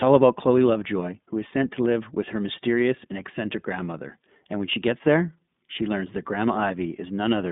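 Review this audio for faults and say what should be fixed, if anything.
The whole clip runs through the iLBC codec, and you can plainly hear it. The band is squeezed to roughly 150 Hz to 3.6 kHz, so the speech sounds boxed-in and phone-like, and there's a rough, slightly synthetic grain throughout. iLBC codes each frame's excitation on its own, so small mismatches at every boundary add up to that texture. The character fits its 20 ms frame, 15.2 kbps mode. To prevent it, record or route the call through a wideband codec, or capture the audio locally before it reaches the narrowband link.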